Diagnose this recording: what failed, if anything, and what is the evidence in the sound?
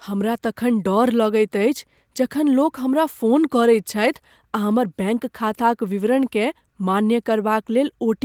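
Nothing has failed in this speech recording: it has passed through Opus voice compression in a full-band hybrid setting, with content reaching up to about 20.2 kHz and only the light coding softness such a path leaves.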